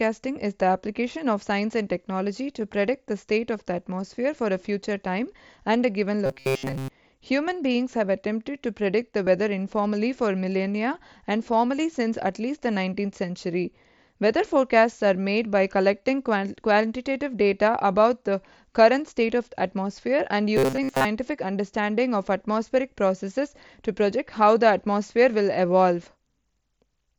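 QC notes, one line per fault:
6.26–6.89 s and 20.57–21.05 s, robotic sound from repeated short buffers: the speech turns into a stiff metallic buzz pinned at 133 Hz, with most of the real audio skipped. That's likely the playback looping a roughly 7.5 ms chunk because fresh audio arrived too late.
9.25–9.27 s, concealed Bluetooth headset packet loss: a 22.5 ms gap, about three mSBC frames' worth, gets patched by continuing the preceding waveform. It sounds like a brief buzzy smear at full level with a slight warble as the real signal comes back.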